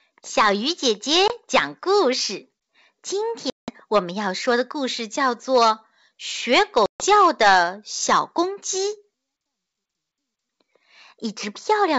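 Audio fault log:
1.28 to 7.04 s, packet loss on an ADPCM call: flat silent gaps at 1.28 to 1.34 s (20 ms lost, about one packet), 3.50 to 3.70 s (180 ms, roughly ten) and 6.86 to 7.04 s (140 ms, around seven). They appear as sharp-edged blank columns on a spectrogram and flatlines in the waveform. Afterwards the decoder's predictor and step size lag the sender's, so speech resumes with brief, slight distortion.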